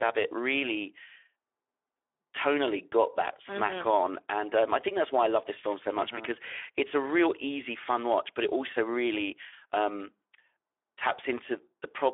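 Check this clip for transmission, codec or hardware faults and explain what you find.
Speex codec damage runs through the whole speech clip. The speech is narrowband, limited to about 300 Hz to 3.5 kHz. The CELP coder has too few bits for the excitation, which fits roughly 11 kbps, so voiced speech sounds noisy and hoarse, with plainly audible codec damage.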